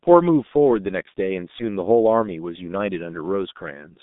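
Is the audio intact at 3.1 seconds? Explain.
No. At 3.1 seconds the speech is still under the G.723.1 codec damage heard across the whole clip. This low-rate telephony coding keeps only about 150 Hz to 3.7 kHz and rebuilds speech from a coarse model in 30 ms frames. The result sounds muffled and hoarse, with smeared consonants, which fits a bitrate near 6 kbit/s.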